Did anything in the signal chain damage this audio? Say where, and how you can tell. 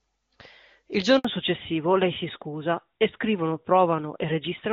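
Yes. At the network stage, a handover gap at 1.19 s silences the sound for 60 ms as the call switched links. It shows as a flat, empty stretch on the waveform.

At the codec stage, a fallback to narrowband from 1.25 s onward strips everything above 4 kHz, which fits a drop to AMR-NB. On the spectrogram, the band that was full before the switch sits empty.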